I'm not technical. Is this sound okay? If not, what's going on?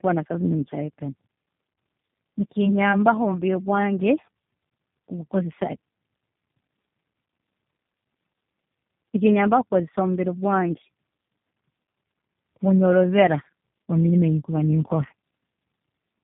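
No. From start to finish the speech sounds rough, dull and warbly, with nothing above about 3.6 kHz. This is tandem speech coding: the call passed through two different phone-network speech compressors in a row, each squeezing audio the previous one had already damaged.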